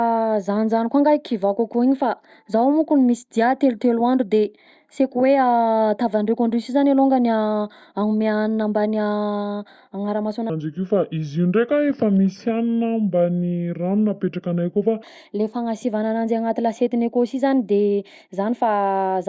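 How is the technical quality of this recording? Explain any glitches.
One section of the recording has a clear playback fault. From 10.50 to 15.03 s the speech suddenly drops in pitch and drags, sounding low, heavy and slowed to about 0.73 of normal speed, with the pitch falling by about 5.5 semitones. This is a wrong sample rate: the audio was played back slower than it was recorded, without any conversion, so speed and pitch fall together by the same ratio. The shift fits material recorded at 22 kHz being played at 16 kHz.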